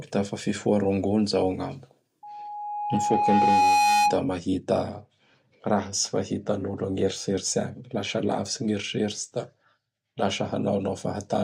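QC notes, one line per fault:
2.23–4.20 s, loudspeaker feedback squeal. A single tone near 829 Hz rises over the speech, swelling for about a second and a half into a squeal. At its peak it sits roughly 5 dB above the speech. The microphone is hearing the loudspeaker it drives. At 829 Hz the loop gain goes past one, so that frequency keeps reinforcing itself. The squeal then cuts off at 4.20 s as the loop breaks.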